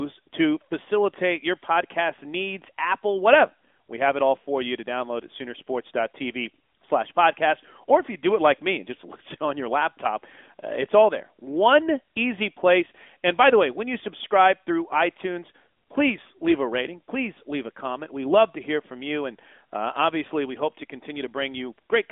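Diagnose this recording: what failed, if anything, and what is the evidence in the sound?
Throughout, the speech sounds thin, boxed-in and buzzy, confined to about 200 Hz to 3.5 kHz with nothing above 3.7 kHz. This is AMR narrowband mobile codec damage at the codec stage. Pulse-driven vocal-tract modelling gives the plainly synthetic edge, which fits a mid-rate mode near 10.2 kbps.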